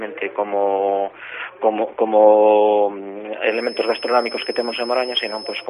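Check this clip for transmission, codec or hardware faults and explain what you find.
One fault is present. From 3.45 s to the end, a feedback whistle sits near 5.2 kHz, about 15 dB below the sound. It is likely a loudspeaker-to-microphone loop held at the edge of feedback, giving a thin tone at one pitch that slowly swells and fades.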